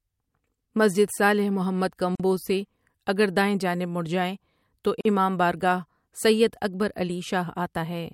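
Gaps at joins of encoded pieces break this speech at 2.15 to 2.20 s, after "مسجد صالح محمد", and at 5.01 to 5.05 s, after "جائے تو". Separately encoded segments were spliced untrimmed, so each join keeps encoder delay and last-frame padding, producing a 43 to 44 ms silence with smeared edges before the sound resumes.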